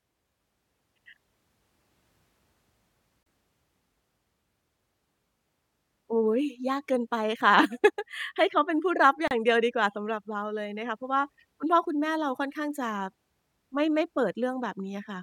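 At 3.23 s and again at 9.28 s, the speech drops into a hard-edged silence about 33 ms long. This is a gap between stream segments. Two segment timestamps don't meet, so silence fills the hole. Nothing is lost, and later audio just shifts. The gaps recur at 6-second segment boundaries.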